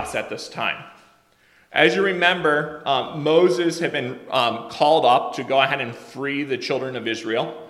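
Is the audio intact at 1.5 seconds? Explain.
Yes, the audio is intact at 1.5 seconds, with no dropout, distortion or other fault at that moment.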